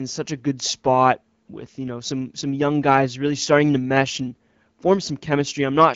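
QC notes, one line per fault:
No faults heard anywhere in this speech.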